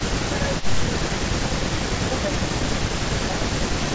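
From 0.3 to 0.76 s the speech dips by a shallow amount in patches. This is likely speech suppressed in double talk, with the echo canceller turning down both its own talker and the loudspeaker echo at once. It returns at 1.48–1.53, 2.04–2.28 and 3.37–3.41 s as a drop in level, with no extra sound added. Inside that first dip, from 0.57 to 0.68 s, a faint echo leak appears as a copy of the voice 303 ms late. It is set apart by being a repeated sound rather than lost level, and is likely loudspeaker pickup that the canceller missed.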